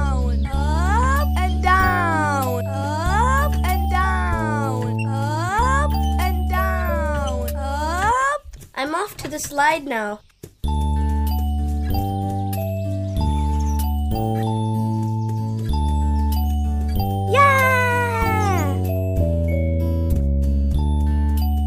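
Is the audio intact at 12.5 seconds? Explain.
Yes, the audio is intact at 12.5 seconds, with no dropout, click, distortion or other fault at that point.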